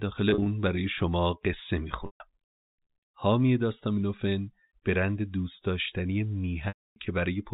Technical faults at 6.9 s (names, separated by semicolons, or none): packet loss with pitch repetition